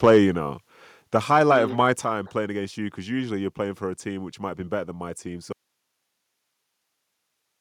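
A speech clip. From 0.04 to 0.18 s the peaks flatten harshly by about 2 dB. This is likely microphone overload, with a few percent of samples clipped. At 1.02 s, just before "the highlight mm of", the level drops by about 4 dB in one step. At 2.04 s, between "highlight mm of my" and "playing against you because", it drops again by about 5 dB. This is likely the microphone volume being stepped down by software. From 5.52 s, after "better than my team", the speech cuts out abruptly. Only hiss remains, about 50 dB down, to the end. This is likely an audio dropout to a faint residue.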